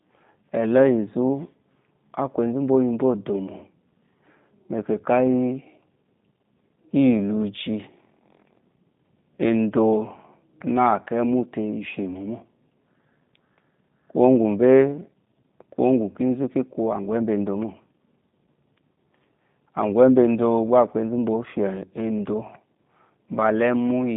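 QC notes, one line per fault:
Throughout, G.729 codec: the speech has that rough, slightly synthetic VoIP sound, consistent with an 8 kbit/s G.729-family coder. Nothing much gets through below 150 Hz or above 3.7 kHz, so it's thin and boxy. The coder doesn't keep the waveform. It rebuilds each short frame from a vocal-tract filter, a pitch predictor and a few pulses, which is why the voice has that buzzy, reconstructed edge.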